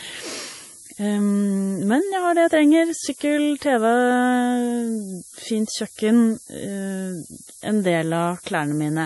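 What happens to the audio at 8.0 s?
Low bit depth with noise shaping is present at 8.0 s, as it is throughout the clip. The speech is quantised to very few levels, which points to about 6 bits. The rounding error is pushed upward in frequency, so a steady, thin hiss sits only about 10 dB below the speech and grows strongly toward the treble.

MP3 compression is also audible at 8.0 s and across the whole clip. Nothing is heard above 11.5 kHz, and weak spectral components flicker in and out between frames, giving a watery, swirly texture with chirpy sibilants and smeared onsets. This is likely from an MP3 encode at a low bitrate around 48 kbps.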